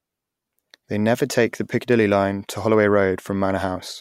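Speech recording with no audible technical faults.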